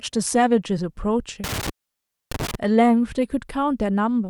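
From 1.44 to 2.55 s, an intermittent contact opens the line for about 620 ms. The speech cuts out with crackle at the edges, leaving faint hiss.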